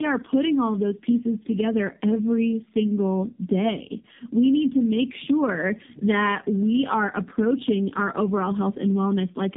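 Tandem speech coding runs through the whole recording. The speech crossed two low-rate mobile speech codecs in a row, probably AMR-NB at around 7 kbit/s, with a telephone-style link between them. Each border meant a full decode and re-encode. The second coder had to work on the first one's damaged output. The losses stacked. The speech sounds rough, muffled and warbly. Nothing is left above 3.7 kHz.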